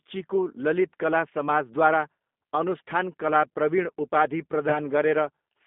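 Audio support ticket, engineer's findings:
G.729 codec throughout: band squeezed to roughly 200 Hz to 3.6 kHz, nothing up top, speech plainly rough and a bit synthetic. Sounds like the 8 kbit/s CELP path, with speech rebuilt from a filter, a pitch predictor and a few pulses per frame.

VoIP packet loss concealed by the speech codec, 4.69 to 4.80 s, right after "अनुष्ठान कला प्रविण उपाधि". Brief smeared stretch that fades out. It fits a single 20 ms packet dropped, with the decoder extrapolating and the damage carrying through about 110 ms.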